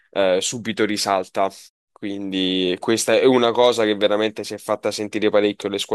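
The clip is speech with no technical faults. In the pauses the background fades to silence and comes back in time for the next sound, with only very quiet sound lost.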